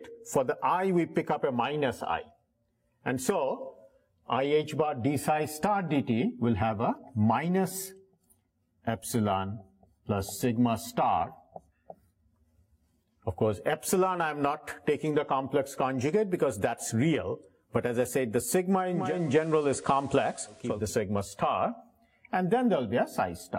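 Between 18.85 and 20.94 s the audio shows digital radio blending to analogue: the receiver lost its digital stream and cross-faded over about 489 ms to the station's FM broadcast. Hiss rises to roughly 30 dB below the signal, and the level shifts by about 2 dB. On a spectrogram a faint noise floor appears across the band, while the waveform shows a small step in amplitude at each blend.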